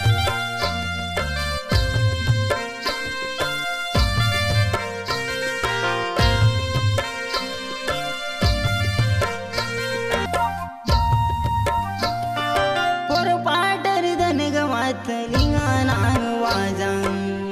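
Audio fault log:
10.26 s, stream segment skipped: the sound jumps abruptly ahead with a brief blip, as if a stretch of material has gone missing. The likely cause is one segment of the stream failing to load, so the player moved straight on to the next. On a waveform this shows as a hard discontinuity, the level and shape changing instantly. A spectrogram shows a thin vertical broadband line at the join, with the pattern before and after not lining up.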